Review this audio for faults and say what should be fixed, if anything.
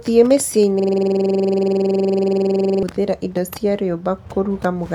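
A system hang loop occurs from 0.80 to 2.83 s: the driver stalled while the sound hardware kept replaying one 46 ms stretch of its ring buffer, which fits a 2048-sample buffer, so the speech gives way to a rapid, buzzing stutter at 21.5 Hz until normal audio resumes just before "indo cia". To prevent it, add a watchdog that mutes or zero-fills the output buffer whenever the audio callback stops delivering fresh samples.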